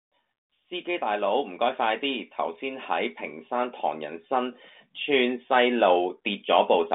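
Speech, with no technical faults to be heard.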